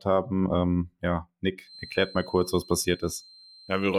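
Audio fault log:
1.61–3.98 s feedback whistle: the loudspeaker-to-microphone loop likely sits at the edge of feedback, sustaining a thin 4.1 kHz tone that swells and fades slowly, around 25 dB beneath the speech.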